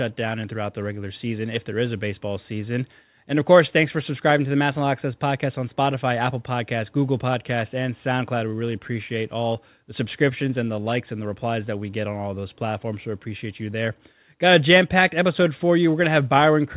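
No technical faults can be heard anywhere in this speech recording. It carries the narrowband sound of a call path, with nothing above 4 kHz, which fits a telephone codec such as G.711 mu-law.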